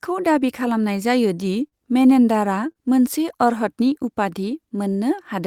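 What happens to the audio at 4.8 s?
Nothing goes wrong at 4.8 s; the speech carries on intact through that moment with no dropout, click or distortion.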